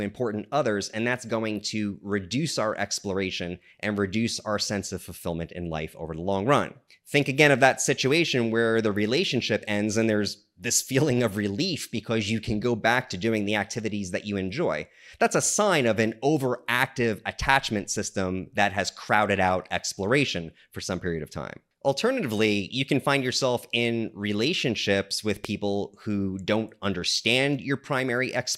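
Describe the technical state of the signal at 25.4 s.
A loud pop occurs at 25.45 to 25.47 s, a single sharp hit standing roughly 15 dB above the surrounding sound. It is likely a brief voltage pulse, such as a switch, static discharge or driver glitch, added to the signal, while the audio continues underneath.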